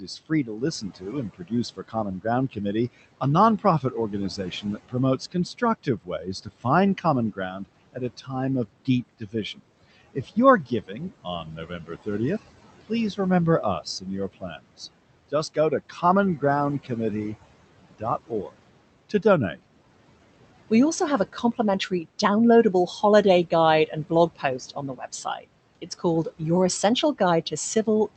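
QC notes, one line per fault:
throughout: noise suppressor artifacts. The room noise, sitting about 18 dB below the speech, is pulled down by about 18 dB in the gaps and comes back up under each phrase, so the residual background pumps frame by frame.
0.00–16.90 s, 17.99–19.57 s, 20.70–28.17 s: speech cut by the noise suppressor. The suppressor misreads quiet speech as noise and turns it down with the background, by up to about 18, 16 and 17 dB respectively. Soft consonants and word endings sound swallowed, adding up to roughly 3 seconds in the first span and a brief moment in the second.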